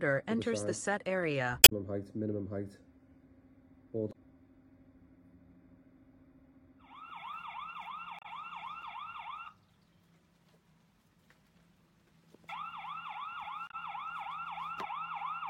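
At 1.61–1.72, 4.09–4.15, 8.19–8.26 and 13.67–13.74 s, damaged data in a compressed stream makes the decoder lose frame sync, producing brief glitches that appear as waveform discontinuities.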